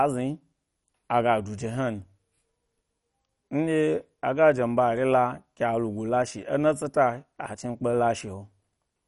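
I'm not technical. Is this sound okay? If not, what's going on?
No, the speech sounds dull and plainly gurgly from start to finish, likely MP2 compression squeezing it too hard, with everything above 11.3 kHz simply gone.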